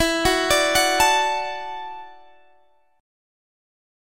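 No technical faults are audible.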